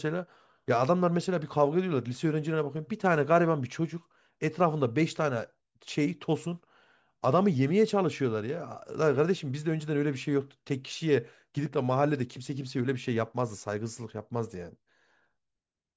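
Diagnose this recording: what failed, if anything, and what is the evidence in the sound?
Nothing in the signal chain has failed: every stage from capture through to playback delivers the speech intact and continuous.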